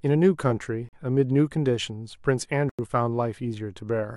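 At 0.89 s the speech drops into a block of digital silence for about 42 ms, then again at 2.69 s for about 93 ms, which fits a 4096-sample buffer going unfilled. Each hard cut to silence and back is heard as a short hole.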